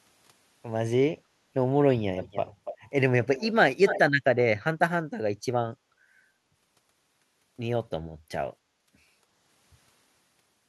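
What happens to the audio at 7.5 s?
Nothing goes wrong at 7.5 s; the speech carries on intact through that moment, with no dropout, click, glitch or other fault to be heard.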